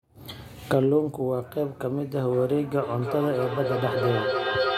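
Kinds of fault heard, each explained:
Feedback howl: From 2.82 s to the end of the clip, a tone near 500 Hz swells out of the speech and climbs to about 2 dB below the speech level, with repeats roughly every 300 ms. Two devices in the same room are on the call, so sound from the loudspeaker re-enters the microphone. Each trip around that loop adds level, and the repeats grow rather than decay, narrowing onto the frequency the loop favours.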